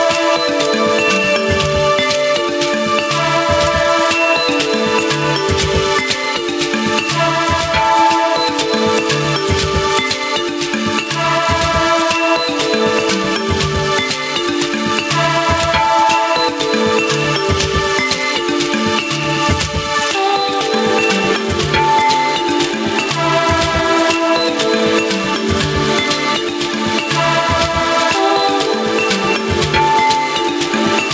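Gain pumping runs through the whole clip: the gain swings by roughly 10 dB, flattening the dynamics. This is likely input gain set far too high, with a fast limiter clamping down on every peak. The call codec's band limit leaves nothing above 8 kHz.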